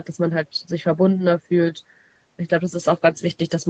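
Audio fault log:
No faults logged; the speech carries the expected call-path band-limiting, with nothing above 8 kHz, consistent with a wideband Opus call.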